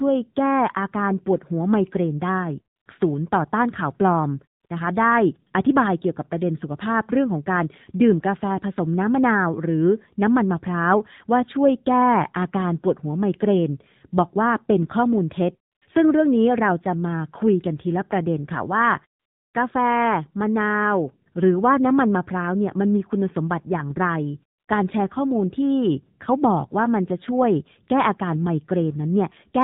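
Throughout, the AMR narrowband mobile codec cuts everything above 4 kHz and leaves the speech plainly buzzy and synthetic, which fits a rate near 7.4 kbps.

AMR comfort noise then replaces the real background with a smooth, steady synthetic hiss at 2.76–2.86 s, 4.60–4.64 s, 4.66–4.70 s, 15.72–15.82 s, 19.20–19.54 s and 24.58–24.68 s. Unlike the muted pauses, which simply fade to silence, these gaps switch to generated noise.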